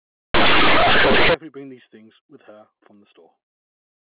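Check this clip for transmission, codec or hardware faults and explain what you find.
One fault is present, on a speech clip carried over G.711 mu-law telephone coding. From 0.34 to 1.34 s, just before "bring these things with", there is companded audio read as linear. The mu-law bytes are played as plain 8-bit samples without expansion. Quiet sound swings as widely as loud sound. The result is a second of very loud, buzzy distortion with harsh noise filling the pauses.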